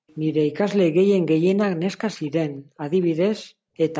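A short speech recording from a call. The room sound is gated by the echo canceller at 0.00–0.07 s, 2.53–2.81 s and 3.40–3.77 s, dropping by about 40 dB before it returns. Faint delayed scraps of the speech appear at 0.08–0.15 s, 2.25–2.31 s and 3.01–3.07 s. They are likely echo leak, trailing by about 230–240 ms and well below the main speech.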